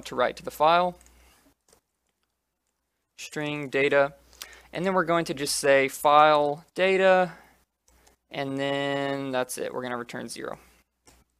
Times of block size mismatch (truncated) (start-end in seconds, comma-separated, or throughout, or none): 10.10-11.40